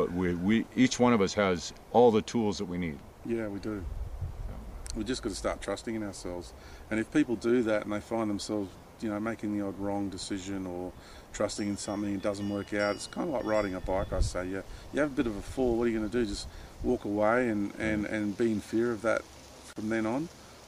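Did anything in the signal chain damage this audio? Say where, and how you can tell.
Yes, there's a gap at a join of encoded pieces at 19.73–19.76 s: about 32 ms of silence, likely from separately encoded chunks spliced without trimming the encoder delay and padding.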